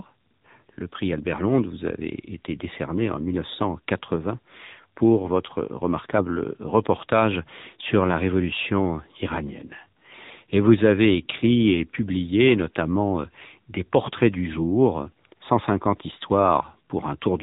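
The whole clip has gone through the AMR narrowband mobile codec: nothing above 3.8 kHz survives, and the speech sounds buzzy and synthetic, which fits a low mode around 8 kbps.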